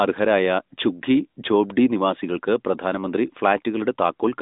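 Speech with no technical faults to point out.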